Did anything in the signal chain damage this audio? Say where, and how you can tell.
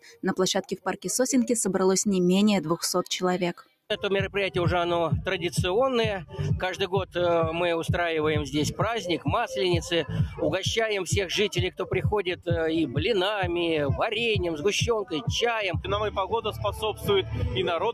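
Yes. The damage is in call processing: a noise suppressor applied to music or sounds runs throughout. Held tones and decays sink by about 5 dB and then recover, while attacks pass, so the sound pumps and thins. A compressor would track loudness; this tracks steadiness instead.

Sound cut by the noise suppressor appears at 0.0–0.25 s, 0.63–1.06 s and 3.54–3.86 s, with drops of about 17 to 18 dB. The level sinks smoothly and onsets survive, which separates it from a packet dropout's abrupt, complete gap.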